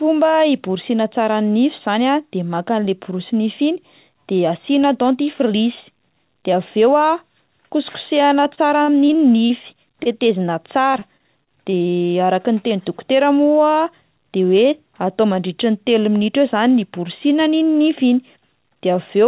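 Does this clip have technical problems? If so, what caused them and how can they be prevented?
Yes. The speech passes through a narrowband call path with nothing above 4 kHz, consistent with G.711 A-law at 64 kbps, and four kinds of fault can be heard in it.

Repeated packet loss (robotic sound) occurs twice. From 8.44 to 9.52 s there are six gaps, the longest 40 ms. About 146 ms is patched by extending the previous sound, roughly 14% of the stretch, and about 60 ms of real audio is lost outright. From 10.92 to 11.74 s there are six more gaps, the longest 29 ms, with 121 ms patched (about 15%) and 100 ms missing. Because the gaps come so close together, the result is choppy sound with pieces missing rather than isolated blips. Prevention: reduce packet loss on the network path, for example by using a wired link, QoS marking, or enabling forward error correction.

Short concealed packet loss occurs at 9.92 to 9.95 s. 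About 20 ms of audio never arrived, and the receiver synthesised 17 ms by continuing the pitch or noise of the preceding sound before blending back into the real signal. This is a single brief smear or wobble, and a little content is actually gone, which distinguishes it from the repeated bursts around it and from a stall. Prevention: the same measures against loss apply, with FEC or redundancy covering single dropped packets.

A short stall from a late packet occurs at 10.03 to 10.08 s. One packet arrived late, the jitter buffer ran dry, and the receiver held the current sound for about 22 ms until the packet turned up. Playback then resumed from the same point. Unlike a loss, nothing is missing. A sound is simply drawn out slightly with a slight buzz or dip, and the playout delay increases by 22 ms. Prevention: reduce jitter on the path, or allow the jitter buffer a slightly larger target delay.

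A jitter buffer speed-up occurs at 14.26 to 14.83 s. The buffer had accumulated more audio than its target, probably after delayed packets arrived in a cluster. To reduce the backlog, the receiver removed short pitch-period slices, about 50 ms in total, so this span plays at about 107% speed. The pitch stays the same and the speech simply sounds rushed, which distinguishes it from a pitch shift or a dropout. Prevention: smooth out packet bunching on the network so that the buffer does not overfill.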